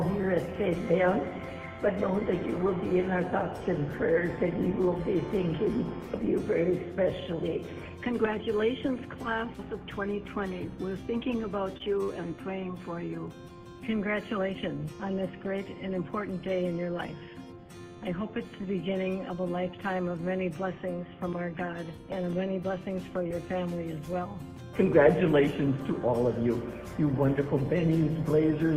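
At 11.77 s and again at 12.04 s comes a short stall from a late packet: the jitter buffer emptied and the receiver stretched the last sound, by 24 ms and then 41 ms, before resuming unchanged. Nothing is lost; the sound just hangs. A spectrogram shows frozen, smeared bands, and the waveform shows a repeated cycle.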